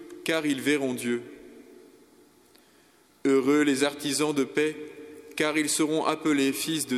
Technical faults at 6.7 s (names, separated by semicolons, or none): none